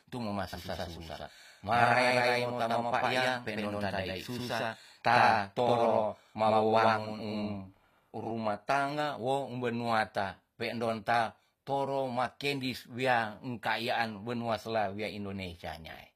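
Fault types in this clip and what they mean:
HE-AAC compression: The speech has likely passed through HE-AAC at a low bitrate, with plainly audible damage throughout. Nothing sounds above 15.5 kHz, and the upper band is rebuilt rather than captured, so s sounds turn gritty and metallic. Unlike simple lowpass filtering, brightness remains but rings false.
doubled audio track: Right after "mo ma", from 0.53 s to 8.31 s, a full-band copy trails the original by roughly a tenth of a second at about equal level, likely from a second, slower capture path. Unlike echo or reverb, it has no decay or room colour and stops abruptly.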